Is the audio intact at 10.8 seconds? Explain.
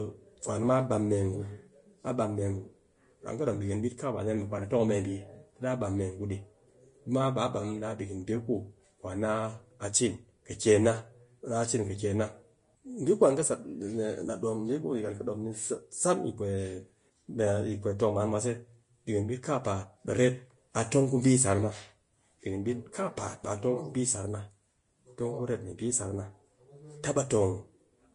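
No, at 10.8 seconds you're hearing Vorbis compression, and it runs through the whole clip. Nothing gets past 10.5 kHz, and the treble is hissy and grainy, likely because the codec quantised it too coarsely, which fits a low bitrate around 32 kbps.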